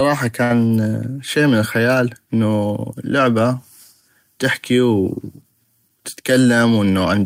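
Right near the start, from about 0.43 to 0.53 s, there's a burst of packet loss. A short run of packets didn't make it in time, so the receiver covered the hole by carrying the last bit of speech forward and letting it fade for around 66 ms. When the stream picks up again, roughly 60 ms of the talker's speech has simply been skipped, so you hear a brief smeared tail followed by a jump.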